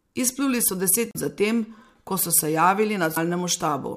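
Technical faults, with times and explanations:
1.09–1.16 s, damaged data in a compressed stream: some bytes in the coded speech arrive corrupted, so the decoder misreads those frames, loses sync and hunts for the next valid frame header. The result is a brief glitch lasting about 75 ms, just before "za tem".
3.13–3.17 s, damaged data in a compressed stream: the same corruption and resynchronisation, shorter this time, gives a blip of about 44 ms just after "so se".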